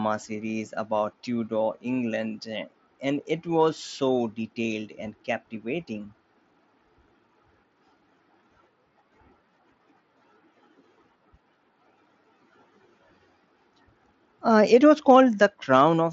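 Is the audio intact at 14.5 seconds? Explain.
Yes, the audio is intact at 14.5 seconds, with no fault at that moment.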